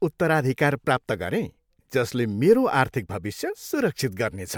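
Nothing here trips any alarm: the speech runs along without a single technical fault turning up anywhere in the recording.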